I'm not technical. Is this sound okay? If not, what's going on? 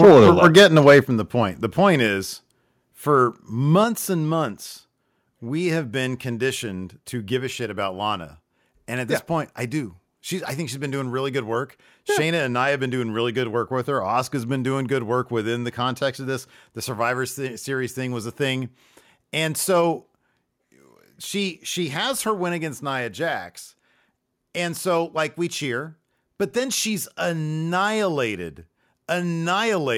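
No, not quite. Right from the start, up to about 0.99 s, there's a harsh, crackly edge on the loudest bits. That's microphone overload. The mic was likely set too loud, so the biggest peaks hit the limit of the converter and got their tops sliced off. A fair chunk of the sound in that first second is squashed like this, which is where the rough, distorted texture comes from.

Then the level drops in sudden little steps, at 0.05 s, 1.05 s, 2.07 s and 3.84 s. Each is a microphone volume step-down. The call software most likely noticed the mic running hot and turned its input down a notch each time. The voice and the background get quieter together, all at once. The step at 1.05 s is the biggest one, and after 3.84 s the level stays put.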